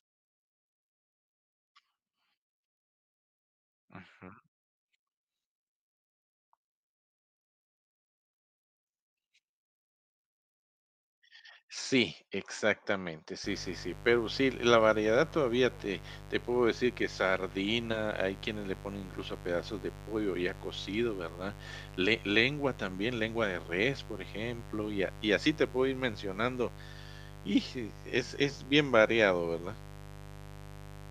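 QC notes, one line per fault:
13.44 s to 31.10 s, mains buzz: a steady, raspy buzz enters partway through the speech and stays to the end, sitting roughly 15 dB below the voice. It is built on 50 Hz mains, with sharp switching spikes leaking in twice per cycle, so the energy is a dense ladder of 50 Hz harmonics climbing into the kilohertz range. That upper harmonic content gives it a rasp rather than a smooth hum.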